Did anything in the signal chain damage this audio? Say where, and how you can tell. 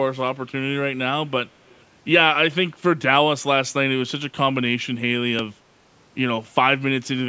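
Yes: an echo leak at 1.68 to 1.83 s, a faint copy of the speech returning about 333 ms after the original, sitting roughly 35 dB below it. The stage is call processing. The likely cause is that the far end was on a loudspeaker and its echo canceller let a fragment of our own signal back through its microphone. The short duration and fixed delay mark it as a residual echo, not reverberation. The band limit near 8 kHz comes from the call's microphone path.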